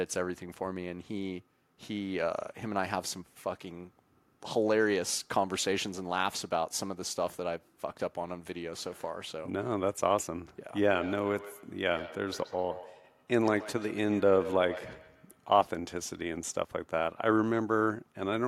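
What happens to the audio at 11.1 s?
At 11.1 s the speech is inside a stretch of feedback echo between two devices, running from 10.83 to 15.5 s. A second device in the room is on the same call and plays back what the first microphone sent; that microphone picks it up again, and its echo canceller cannot remove sound played by another device. Each word therefore returns at a fixed interval of roughly 150 ms, peaking at about 14 dB below the speech.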